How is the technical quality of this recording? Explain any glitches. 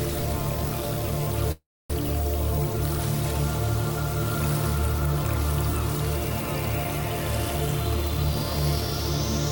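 One glitch affects the recording. From 1.52 to 1.91 s there is a likely long network dropout: the last sound is stretched into a fading tail and then 270 ms of silence. The audio resumes with about 300 ms skipped and a timing shift of around 70 ms.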